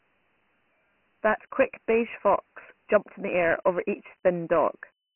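From start to finish the speech carries Dialogic VOX ADPCM damage: coarse 4-bit steps leave a heavy gritty hiss riding each syllable, and nothing survives above 2.9 kHz, which fits a 6 kHz sample rate. A spectrogram shows a hard ceiling there and a grainy noise floor tracking speech.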